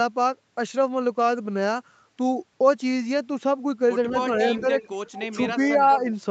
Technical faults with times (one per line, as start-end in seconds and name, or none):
4.54-4.90 echo leak
4.60-4.67 speech suppressed in double talk
5.16-5.27 echo leak
5.93-5.97 echo leak